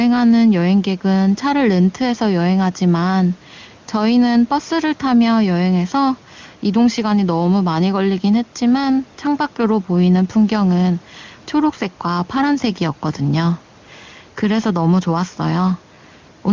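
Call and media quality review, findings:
No findings for this call and media quality review.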